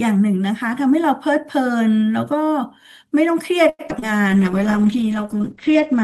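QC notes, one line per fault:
3.69–4.04 s, repeated packet loss (robotic sound). Five gaps fall in this third of a second, the longest about 96 ms. The receiver patched each one by stretching the last sound it had. About 146 ms was filled that way, and 121 ms is simply missing. Roughly 42 percent of the span is patched rather than real. The speech turns choppy and mechanical, with pieces dropped between the repeats.
4.30–6.04 s, call bitrate drop. The encoder's rate fell from 48 to 10 kbps and stayed there to the end, about 1.7 s. At that rate the coding is coarse. The audio band also shrank from 20 kHz to 8 kHz. The speech sounds duller and rougher. The top end is gone, and the fine detail takes on a watery, smeared quality.
4.30–4.82 s, jitter buffer slow-down. The receiver's buffer was running low or had raised its target delay, and it built up a reserve. It repeated single pitch cycles and slices of pause many times. 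This added about 60 ms over half a second, so playback ran at about 90 percent speed. The pitch stays put, but sounds are drawn out.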